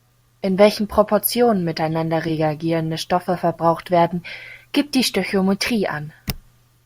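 At 2.28 s, compressed frames are skipped. The speech jumps forward by a tiny amount, roughly one frame's worth. That is around 10 ms of audio, which fits a 10 ms frame size. The missing frame was either absent from the stream or rejected by the decoder as damaged.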